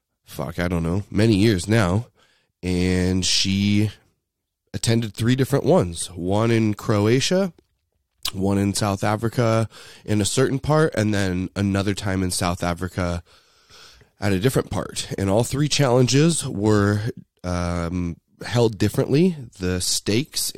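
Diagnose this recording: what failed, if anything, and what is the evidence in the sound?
Nothing failed in this recording, and the sound offers no evidence of any fault.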